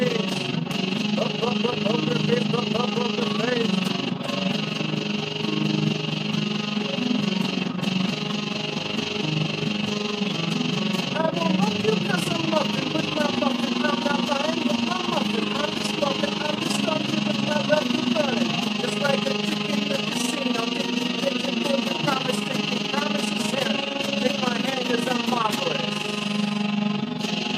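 From start to finish the level pulses in a steady overlap-add ripple, rising and falling by about 11 dB at around 20 times a second. The audio was split into windowed frames and rejoined with an overlap whose windows do not add up to a constant gain, so the level rises and falls once a frame. It sounds like a fast flutter or rough tremolo. The waveform shows a regular scalloped envelope, and a spectrogram shows evenly spaced vertical banding.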